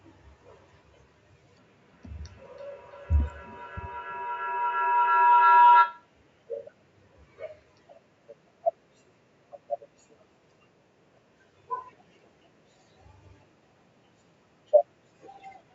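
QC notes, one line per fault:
1.59–6.13 s, feedback howl: a microphone-to-loudspeaker loop gains level on each trip, so repeats grow and narrow to a tone near 1 kHz. It pulses roughly every third of a second and peaks about 4 dB above the speech. The spectrogram shows a bright horizontal band, and the waveform shows a swelling, pulsing envelope.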